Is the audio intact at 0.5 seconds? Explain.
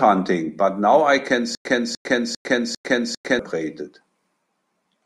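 Yes, the speech at 0.5 s is intact, with no dropout, click, distortion or other fault at that moment.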